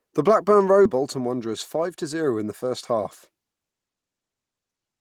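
A skip ahead occurs at about 0.85 to 0.97 s. Around 0.7 seconds of speech never reaches the listener. It was lost in transit or discarded by an overfull jitter buffer while later audio was already queued. Playback leaps forward to that waiting audio with no silence inserted, only a join of a few milliseconds. The speech therefore runs straight on across an abrupt seam, and the delay drops by roughly the same amount.

A jitter buffer speed-up follows from about 1.46 to 2.05 s, ending just before "zero in the first". The buffer was holding more audio than its target, so the receiver repeatedly cut out short pitch-period-sized slices to bring the delay down. The speech plays about 7% fast for that stretch while keeping its pitch, so it sounds slightly rushed. In total roughly 50 ms of audio is removed.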